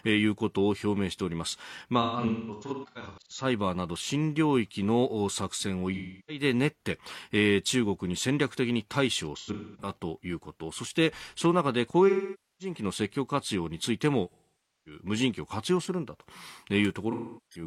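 AAC frame loss with concealment breaks the speech six times: 2.01–3.45 s, 5.94–6.43 s, 9.35–9.89 s, 12.08–12.75 s, 14.31–15.01 s and 17.12–17.65 s. The decoder patches each dropout from the last good spectrum, so the gaps come through as smeared, noisy, phasey stretches. The first and third are scattered losses totalling 896 ms and 341 ms, with runs up to about a fifth of a second. The others are solid losses of 341 to 555 ms.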